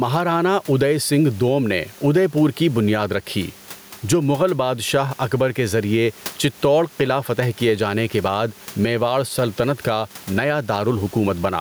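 Gain pumping runs throughout this speech recording: the room noise, sitting about 32 dB below the speech, swells in each pause and ducks by around ten decibels under every loud syllable, likely from excessive input gain driving a fast limiter.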